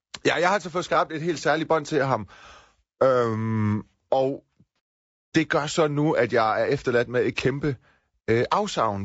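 Throughout the clip the speech has been squeezed through a low-bitrate, low-delay codec, likely low-delay AAC compression of the AAC-ELD kind used for video calls, at a rate that points to around 32 kbps. Its short frames cannot separate the voice's harmonics cleanly, and at this bitrate the bits run thin. The voice comes out plainly rough and grainy, with a noisy haze filling the gaps between harmonics and a thinned, artificial top band.

From 4.76 to 4.79 s, just before "det gør så nu", a stretch of coded audio failed to arrive, and the decoder papered over the hole. This is AAC frame loss with concealment. The 30 ms gap fits a single missing frame, which the decoder rebuilt from the last good spectrum rather than from the real signal. The result is a brief smeared, noisy patch where the speech loses its definition before clean decoding resumes.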